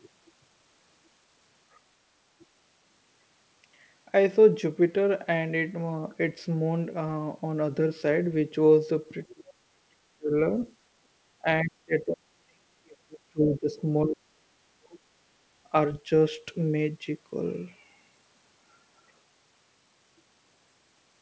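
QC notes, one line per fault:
2.39 to 15.03 s, speech suppressed in double talk: the speech dips or drops out at 2.39–2.44 s, 9.32–9.53 s, 9.71–10.01 s, 10.17–10.34 s, 11.42–11.46 s, 11.64–13.82 s and 14.04–15.03 s. The brief dips at 2.39 and 11.42 s are shallow, around 10 to 15 dB. The others fall by roughly 35 to 40 dB, and the two longest, of about two seconds and one second, nearly silence the talker. This likely comes from an echo canceller that cannot tell the near talker from loudspeaker echo while both sides speak, so it turns both down.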